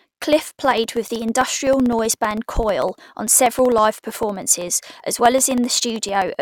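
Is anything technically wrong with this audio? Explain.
Yes. From 0.07 to 6.35 s, periodic USB or driver dropouts blank about a millisecond of the speech every 64 ms, around a hundred times. Each gap, caused by a background task stalling the audio path, is heard as a steady tick train during the speech, and shows as thin vertical lines in a spectrogram and tiny flat gaps in the waveform.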